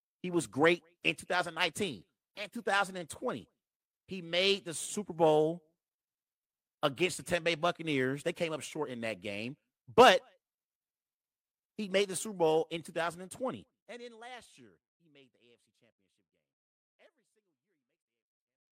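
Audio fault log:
No faults found in the speech; the level eases down in a smooth, editor-style fade-out from roughly 13 s onward, with no click or hard edge.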